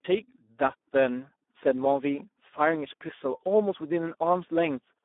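Speex codec damage runs throughout. The speech sounds hoarse, noisy and almost robotic, fitting a low 8 kbps setting. Nothing reaches above about 3.8 kHz.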